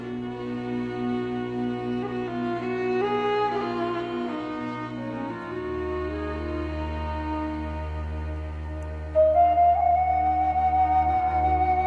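No technical faults can be heard anywhere in the audio, and the signal stays continuous and steady throughout.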